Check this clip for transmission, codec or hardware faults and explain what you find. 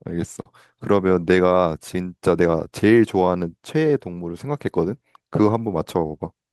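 There's one fault, a short stall from a late packet at 0.41 to 0.46 s. The packet arrived late, so the receiver stretched the sound for about 39 ms. You hear a brief held smear, and nothing's lost.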